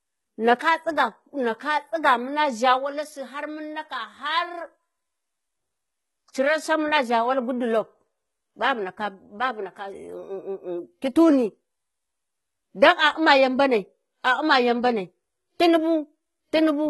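All the way through, the speech has gritty, lispy s sounds over a bright but synthetic top end, likely HE-AAC compression rebuilding the treble from copied lower bands, fitting a bitrate around 16 kbps.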